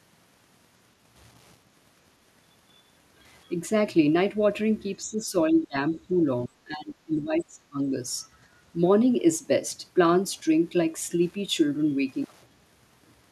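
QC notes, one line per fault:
Throughout, Wi-Fi interference: a steady ticking runs under the speech about ten times a second, a 102.4 ms beacon period, sitting about 40 dB below the signal. A nearby Wi-Fi radio's beacon bursts are being picked up and rectified by the audio circuitry, so each transmission lands as a small click. The regular spacing is what identifies it as radio pickup rather than acoustic noise.
5.03–5.76 s, 5.95–6.11 s and 6.47–7.92 s, speech suppressed in double talk: the speech level sags in patches. It dips only slightly in the short middle stretch, drops by about 10 dB in the first, and falls hard in the last, by roughly 25 dB, with about a second of it affected. This is likely an echo canceller turning down the near-end talker while the far side also speaks, unable to separate voice from loudspeaker echo.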